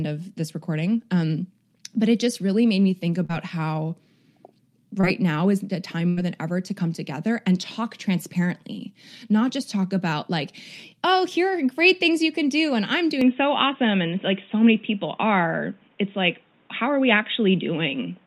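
Just after "really made me think", at 3.25 to 3.31 s, there is a short concealed packet loss. About 40 ms of audio never arrived in time. The receiver patched 35 ms of it by extending the last sound, then blended back into the real signal. It is heard as a brief smear in the speech. A second, smaller one follows at 5.01 to 5.05 s. Here 20 ms went missing and was filled. It passes as a brief smear or wobble.

At 6.09 to 6.19 s comes a burst of packet loss. It falls between "now is the time" and "than ever to come". About 80 ms was lost in a row. The receiver carried the last sound forward for 79 ms, fading it as the gap went on. So the last sound is held and fades out. Then speech resumes further on. What lay in that stretch is simply gone.

From 13.21 s, right after "can do and I'm", the sound changes to the end of the clip. Nothing passes above 3.8 kHz, so the voice turns dull and boxy at once. 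There is no silence at the change. The level shifts by a few decibels. A new noise floor appears, roughly 40 dB under the speech. This is likely an input switched to a poorer device, with its own narrower band, tone and hiss.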